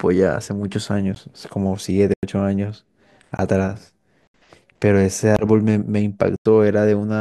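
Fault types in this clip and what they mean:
Block of digital silence: six times, blocks of speech samples are replaced by zeros lasting 15 to 93 ms, the longest fitting a 4096-sample buffer. Each cuts in and out without a fade. The waveform shows flat-line gaps with abrupt edges, and the spectrogram shows blank columns edged by broadband click streaks.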